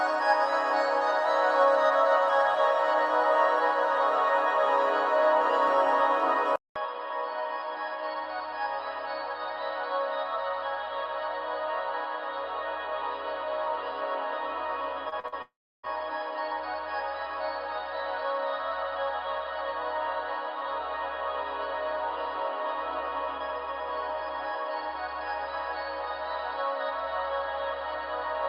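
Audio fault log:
6.56–28.48 s, input switched to a poorer device: a 200 ms gap, then duller, boxier audio about 10 dB quieter; the spectrogram is bare above 4.9 kHz, with a steady noise floor appearing about 30 dB down. The likely cause is a change to a narrower-band microphone.
15.09–15.34 s, short concealed packet loss: three brief smears or wobbles of about 20–40 ms each, at 15.09–15.14, 15.20–15.26 and 15.28–15.34 s, where the missing audio was patched from the preceding sound. They show as smeared, repetitive-looking slivers in the spectrogram.
15.42–15.85 s, long network dropout: about 0.42 s of audio is missing. A fading buzz or hiss stands in for it, then roughly 0.32 s of near-silence; the waveform shows a decaying tail and a flat stretch. The likely cause is audio that stopped arriving.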